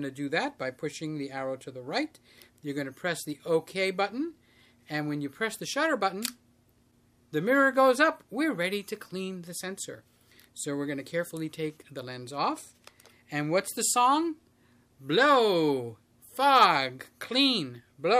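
No technical fault can be heard anywhere in the clip. Nothing in it calls for a time stamp or a closer listen.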